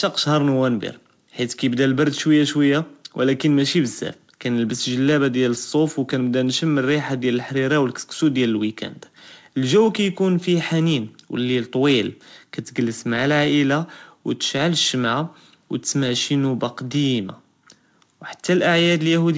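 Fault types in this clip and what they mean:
Nothing stood out on listening to this speech as it came over the call path.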